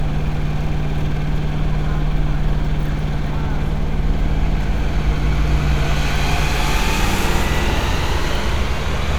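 Nothing here calls for comment: the sound runs along without a single technical hiccup to point to.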